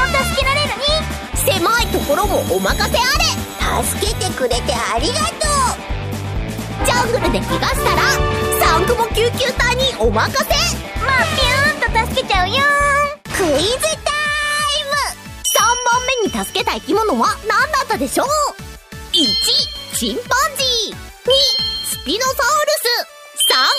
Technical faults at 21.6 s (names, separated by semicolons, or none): none